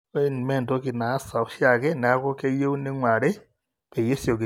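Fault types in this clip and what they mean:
No fault types are present in this clip.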